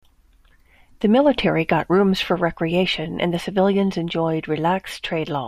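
From 3.09 to 4.59 s the speech carries sample clock jitter. The converter's timing wanders by around half a microsecond, so each sample lands slightly off. A faint hiss results, roughly 55 dB down, riding on loud, bright consonants and gone in pauses. On a spectrogram it shows as a haze that rises only during those sounds.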